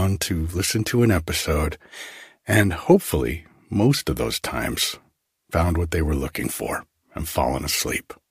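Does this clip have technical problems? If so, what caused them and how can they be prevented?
No, this clip has no technical problems, so there is nothing that needs preventing.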